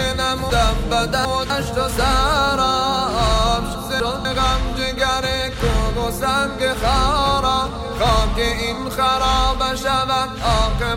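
From 0.5 to 1.5 s, chunks play out of order: a 250 ms chunk lands three chunks late, after the audio meant to follow it. Nothing is lost, but there are three hard joins and the passage sounds jumbled. From 3.75 to 4.25 s, one chunk plays one place late, giving a shorter garble.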